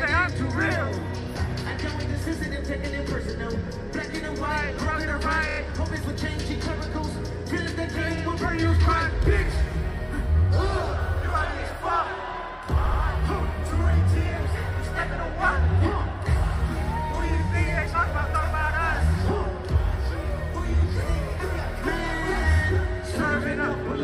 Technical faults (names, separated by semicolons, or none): repeated frames